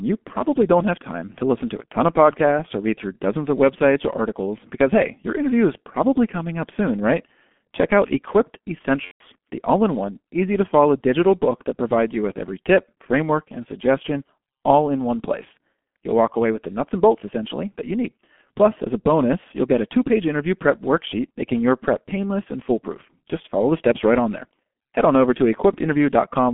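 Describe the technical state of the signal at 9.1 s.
At 9.1 s the sound sits inside a VoIP packet loss concealed by the speech codec, from 9.05 to 9.22 s, just before "the all in one". The decoder rebuilt about 150 ms, which fits five lost 30 ms frames, by repeating its last pitch and filter at falling gain. It sounds like a stretched, fading sound that is muted from the third lost frame onward. On a spectrogram it shows as smeared energy that cuts to silence, and on the waveform as a repetitive, decaying envelope.

Underneath, the whole clip carries heavy G.723.1 codec damage. The line band is roughly 200 Hz to 3.4 kHz, and the coarse, slowly updated voice model, which fits a rate of about 6.3 kbit/s, makes the speech muffled and hoarse with blurred consonants. A spectrogram shows empty space above 3.4 kHz and blocky 30 ms frame structure.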